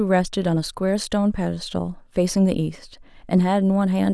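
No technical faults are audible.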